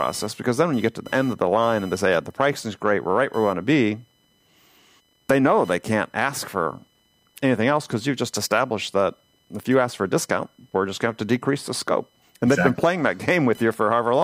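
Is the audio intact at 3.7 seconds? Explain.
No. Computer activity noise runs through the whole clip, including 3.7 seconds. Processor, graphics or mouse load shifts the shared ground of the audio circuit. That leaks in as a buzzing, chirping pulse near 1 kHz, roughly 30 dB below the speech.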